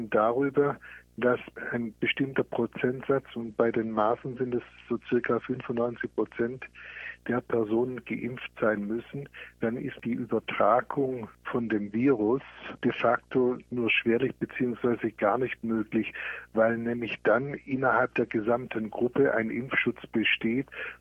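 Video or display buzz runs from start to finish: a steady 60 Hz buzz with hash above it, sitting around 35 dB below the signal. It comes from a screen or video cable coupling into the audio path.

A Bluetooth SBC bit pool drop occurs at 3.41–7.19 s, 11.60–13.77 s and 17.07–18.45 s. Each time, a congested link forced the encoder to squeeze the data, which fits a bit pool falling from 28 to 11, near 90 kbps. The treble dulls and gritty noise rises until the rate recovers.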